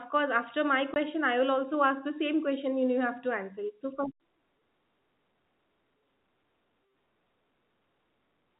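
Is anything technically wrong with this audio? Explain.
Yes. From 0.94 to 0.96 s there is packet loss filled with silence. A 20 ms stretch of the speech never arrived, and the receiver played a gap of silence in its place. The length fits a single lost packet. The cut starts and stops abruptly, leaving a short hole. The narrowband G.711 telephone coding around it still holds everything to below 4 kHz.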